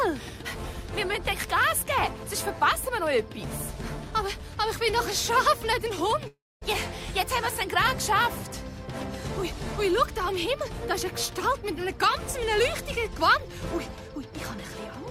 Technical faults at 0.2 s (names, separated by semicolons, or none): none